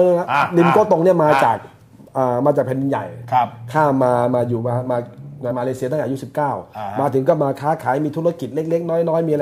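The audio has one burst of damaged data in a compressed stream, from 5.48 to 5.52 s. It is a brief garbled blip about 40 ms long. Corrupted bytes made the decoder misread those frames. It lost sync and hunted for the next valid frame header before playback resumed.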